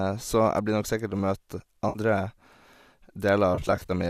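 AAC frame loss with concealment at 1.89 to 1.99 s and 3.55 to 3.91 s: the decoder rebuilds missing frames from the last good spectrum, leaving brief smeared, phasey patches, the second broken into short gaps.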